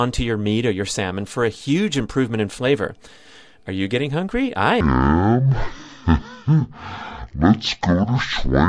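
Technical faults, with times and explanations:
4.81 to 8.68 s, wrong sample rate: from 4.81 s the samples go out at roughly half the rate they were captured at, consistent with 44.1 kHz material being clocked out at about 22 kHz with no resampling in between. Each sample is held twice as long, so the speech runs at 0.5 times its proper speed and every frequency is halved, dropping the voice a full octave, 12 semitones. It sounds slow, drawn out and unnaturally deep through to the end.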